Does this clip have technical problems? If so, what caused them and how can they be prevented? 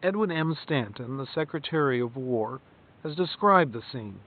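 No, this clip has no technical problems, so there is nothing that needs preventing.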